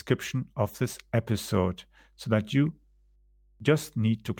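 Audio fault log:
Throughout, mains hum: power-line coupling adds a steady 50 Hz tone about 35 dB below the speech, visible as an unbroken horizontal line on the spectrogram.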